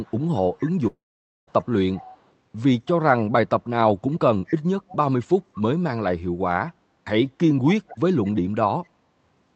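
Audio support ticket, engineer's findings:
Echo leak at 0.03–2.22 s, 4.47–4.55 s, 4.89–5.62 s and 7.69–7.98 s. A delayed copy of the far-end speech returns about 220 ms late, at about 25, 20, 25 and 15 dB below the speech. Likely an incomplete echo canceller at a loudspeaker end.

Long network dropout, 0.87–1.49 s. About 0.6 s of audio never arrives. The receiver stretches the last sound into a fading fill, then about 0.49 s of silence. Audio resumes without the lost part. Likely packet loss on the network path.

The call path audio is band-limited at 8 kHz, which fits Opus at around 48 kbps.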